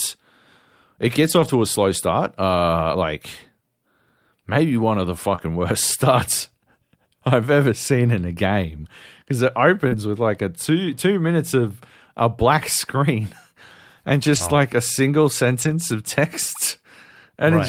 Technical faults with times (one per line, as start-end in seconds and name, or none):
1.23-1.49 lost packet rebuilt from error correction
5.35-5.40 short concealed packet loss
5.38 lost packet rebuilt from error correction
9.88-9.94 short concealed packet loss
9.92 lost packet rebuilt from error correction
11.60-11.66 lost packet rebuilt from error correction
14.36 lost packet rebuilt from error correction
15.62-15.72 lost packet rebuilt from error correction